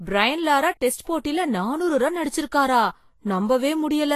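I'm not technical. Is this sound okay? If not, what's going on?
No, not quite. All the way through, the speech has a grainy, hissy edge, like fine sand sprinkled over the top, and the consonants sound smeared. The very top of the sound is simply missing, with nothing above about 14.2 kHz. That's most likely Vorbis compression squeezed too hard: to save space it chops off the highest sounds and replaces fine detail with rough noise.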